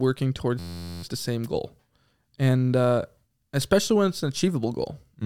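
From 0.59 s to 1.03 s, just before "the same goal", the speech locks into a system hang loop. The host or driver stalled while the audio hardware kept replaying its ring buffer, so one 11.61 ms fragment repeats dozens of times without change. A 11.61 ms loop fits a 512-sample buffer. Because the loop is so short, it sounds like a steady, tonal buzz at about 86 Hz. Once playback resumes, the speech continues with essentially nothing missing.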